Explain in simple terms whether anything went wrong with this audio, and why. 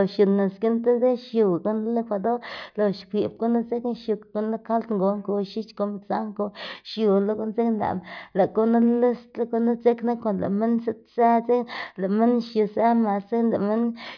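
Nothing went wrong with this recording that I can hear.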